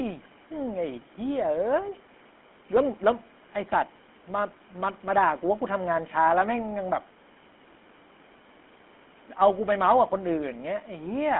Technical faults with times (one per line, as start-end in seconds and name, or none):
0.00-11.40 GSM full-rate codec